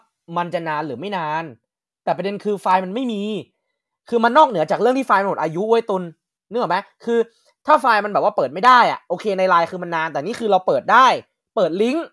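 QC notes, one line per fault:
No faults found on listening to the speech.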